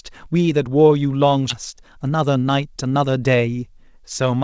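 Speech, with two timing faults. At about 1.50 s a skip ahead occurs: roughly 400 ms of audio is simply absent, and the sound on either side is butted together with no fill. With later audio already waiting, that stretch was dropped, cutting the delay by roughly that amount. On a waveform this shows as an abrupt splice with a discontinuity in the envelope. On a spectrogram the harmonic tracks and formants break off and restart mid-pattern without any silence between them. From 1.74 s to 3.49 s a jitter buffer speed-up follows. Playback runs at 110 percent, at unchanged pitch, as the receiver trims short pitch-period-length pieces again and again, roughly 200 ms in total, to bring the buffer back toward its target. The speech sounds hurried there. A spectrogram shows syllables and pauses compressed in time while harmonic spacing stays the same, and in the waveform whole periodic cycles are repeatedly cut out. 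Throughout, the call-codec path cuts everything above 8 kHz, visible as a flat ceiling on the spectrogram, which fits a wideband codec such as G.722.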